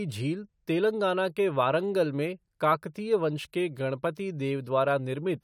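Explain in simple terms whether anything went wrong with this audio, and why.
Listening to this speech recording, nothing stood out as having gone wrong.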